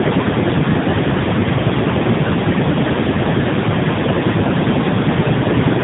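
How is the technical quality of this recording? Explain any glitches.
The quality is poor throughout. Tandem speech coding runs the whole clip: the audio sounds decoded and re-encoded through roughly three speech codecs in turn, which fits a chain like CVSD, then AMR-NB at two low bitrates. Each pass degrades the last, leaving rough, muffled, warbly speech with nothing above 3.8 kHz, harsher than one narrowband codec alone.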